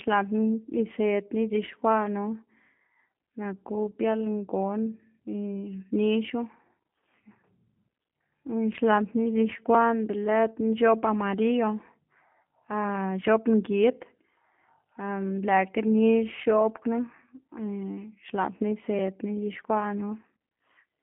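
Throughout the speech, G.729 coding is plainly audible. Nothing passes above 3.5 kHz, within a 150 Hz to 3.4 kHz band. Plain telephone band-limiting would sound smooth, but here speech is rebuilt from a filter and sparse pulses, adding a rough, synthetic edge that fits 8 kbit/s coding.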